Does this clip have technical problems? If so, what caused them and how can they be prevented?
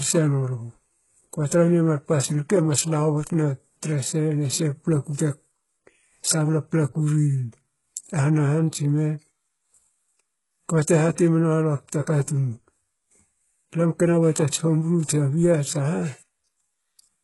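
Yes. All the way through, the speech's treble sounds gritty and metallic, s sounds go lispy, and nothing reaches past 11.5 kHz. That's likely heavy HE-AAC compression rebuilding the top by copying lower bands upward, which fits a bitrate near 12 kbps. Encoding at a higher bitrate prevents it.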